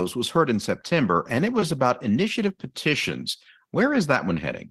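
No technical faults can be heard anywhere in the speech recording; the signal holds together without interruption or damage from beginning to end.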